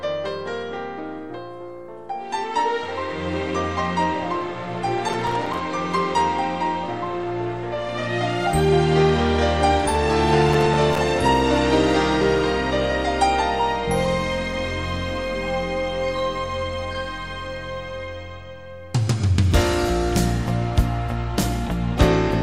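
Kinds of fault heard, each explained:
Processor overload crackle: the processor keeps missing its deadlines for short audio buffers, and each miss drops in a tiny silent gap with hard edges. You get two gritty bursts, around 5.09 to 5.61 s and 10.49 to 10.98 s. The first has roughly twice as many dropouts, and the spacing fits buffers of a few milliseconds.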